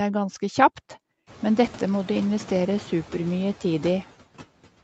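A noise suppressor runs across the whole speech clip, pulling down by about 17 dB whatever bands it judges to be steady noise, frame by frame. Once the room noise swells by roughly 22 dB at around one and a half seconds, the suppressor works harder: the background drops away in the gaps and comes back under each phrase, all within the roughly 8 kHz band of the Opus call path.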